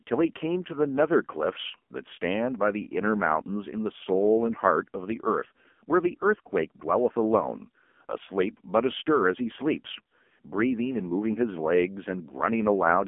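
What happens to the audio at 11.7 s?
At 11.7 s the speech carries the AMR narrowband mobile codec artefact present across the whole clip: a 200 Hz to 3.4 kHz line band with nothing above 3.5 kHz, and heavy buzzy, synthetic coloration from pulse-driven vocal-tract modelling, which fits a low AMR-NB mode near 5.9 kbps.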